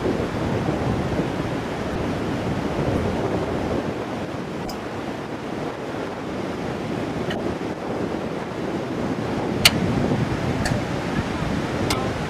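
Short chirps and bursts of noise cut through the sound at 1.91–1.97, 2.94–2.98, 4.65–4.72, 7.30–7.39, 9.61–9.71, 10.63–10.69 and 11.90–11.96 s. Each is a corrupt frame decoded: flipped bits in a few compressed frames were played anyway, throwing energy to wrong frequencies.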